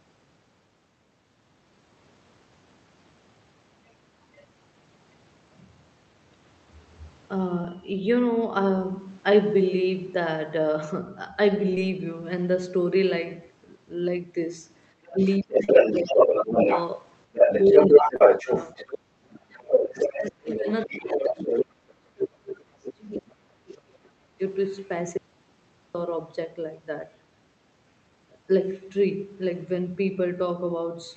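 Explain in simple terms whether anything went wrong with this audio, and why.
Several things went wrong, all typical of a phone or video call.

Short concealed packet loss: small pieces of the call arrived too late at 7.61, 11.75, 15.64 and 18.16 s, so the receiver guessed the missing sound. Each gap sounds like a brief smear or wobble.

Other side's voice leaking through: the far person's voice, likely playing from a loudspeaker and not fully cancelled, is heard from 15.06 to 16.81 s, 17.33 to 18.99 s, 19.75 to 21.94 s, and briefly at 23.14 s. At times it is as loud as the main talker or louder.

Speech suppressed in double talk: when both people talked at once, the echo canceller likely turned everything down. The main voice dips or cuts out in pieces from 15.13 to 16.67 s, 17.69 to 21.50 s, and 22.09 to 24.40 s.

Audio dropout to silence: the input was likely lost, perhaps through a disconnect or mute, from 25.17 to 25.95 s. 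The sound stops completely for most of a second, leaving dead silence.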